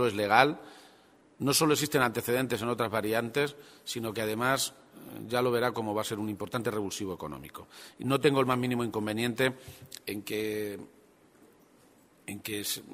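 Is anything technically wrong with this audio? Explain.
No, nothing technically wrong can be heard here.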